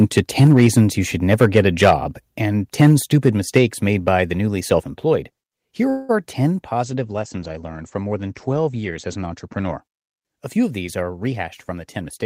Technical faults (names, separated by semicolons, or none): microphone overload; microphone volume stepped down; call audio freeze; call bitrate drop; jitter buffer speed-up